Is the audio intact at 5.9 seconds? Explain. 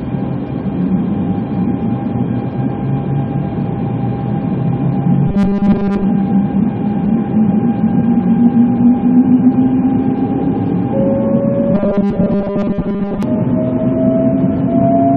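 No. From about 5.27 to 6.04 s there's robotic sound from repeated short buffers. It sounds like a stiff, metallic buzz at 200 Hz that still loosely tracks the sound's shape. The likely cause is audio arriving too slowly, so playback keeps looping the last tiny chunk, about 5 ms, which fits that 200 Hz pitch. Most of that stretch, around two thirds or more, is repeats rather than real audio.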